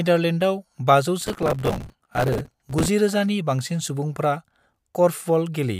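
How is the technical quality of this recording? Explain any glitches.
The recording has one clear glitch. Processor overload crackle runs from 1.21 to 2.88 s. The processor fell behind on many short buffers in a row, roughly 5 ms each judging by the grain. Each missed deadline replayed a stale scrap of audio with hard edges, so the speech carries a gritty, tearing crackle until the load eases.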